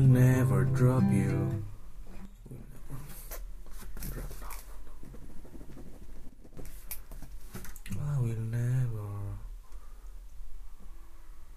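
At 2.25 to 2.76 s and 6.29 to 6.57 s, sudden gain jumps drop sound and background together by about 6 dB and 7 dB, likely from unramped digital gain changes.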